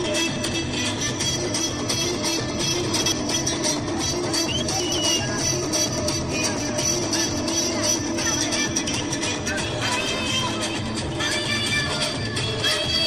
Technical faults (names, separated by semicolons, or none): chunks out of order